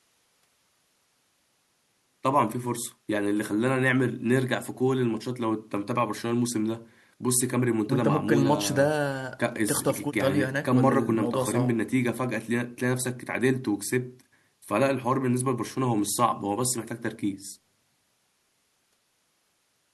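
No technical faults can be heard anywhere in the speech recording, with the signal staying continuous and steady from the first moment to the last.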